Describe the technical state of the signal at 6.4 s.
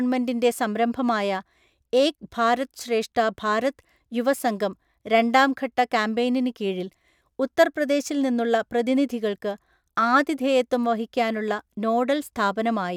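At 6.4 s the speech signal is intact, with no audible technical fault at that moment.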